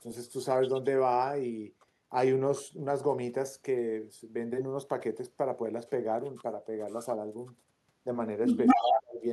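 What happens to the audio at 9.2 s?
At 9.2 s the speech is caught in a stretch of speech suppressed in double talk, running from 8.74 to 9.24 s. The level falls sharply, at its deepest by roughly 35 dB. The likely cause is an echo canceller that confused the talker with loudspeaker echo and turned both down.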